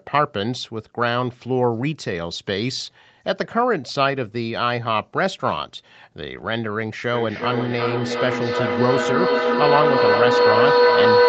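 From 7.13 s on, a self-amplifying audio loop causes feedback howl, a tone around 500 Hz building on a loop that repeats about every 0.4 s, peaking about 6 dB above speech.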